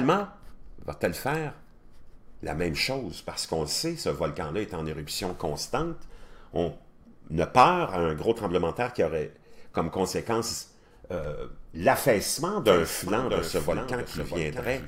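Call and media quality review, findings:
Likely a second capture path or misaligned edit mixing audio twice. Doubled audio track 12.66 s to end: copy about 10 dB down, roughly 0.7 s behind, abrupt onset.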